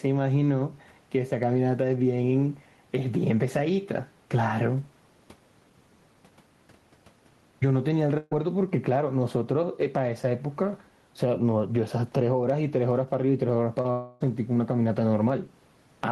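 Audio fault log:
Throughout, gain pumping: the level swings by roughly 10 dB. That's most likely the input gain set far too high with a fast limiter or compressor clamping down on each peak, so loud and soft parts end up pressed together and the whole thing sounds squashed. The room noise sits about 41 dB under the speech, and the pumping rides on that floor.
8.17 to 8.33 s, burst of packet loss: about 140 ms of audio goes missing here. The receiver covers roughly 138 ms of it by carrying on the last sound and letting it fade out, so whatever was playing turns into a short held buzz or a dying hiss instead of a clean gap. Then the speech picks up again further on, with that stretch gone.
13.81 to 13.86 s, short concealed packet loss: about 40 ms never made it to the decoder in time, and around 32 ms of that gets patched over. The receiver extends the last sound, keeping its pitch if it was voiced or using shaped noise if it wasn't, then blends back into the real audio. 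You hear a quick smear or wobble, and a short consonant there can just disappear.
13.91 to 14.26 s, long network dropout: about 300 ms doesn't arrive, likely from the network stalling for a moment. The receiver fills around 292 ms by continuing the last sound as a buzz or hiss that fades down, and there's no dead silence in the stretch, just that decaying tail. The speech comes back later without the lost part, and about 15 ms of extra delay creeps in at the join.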